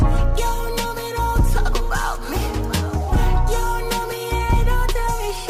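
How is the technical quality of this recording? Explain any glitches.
No glitches or technical faults can be heard anywhere in the recording.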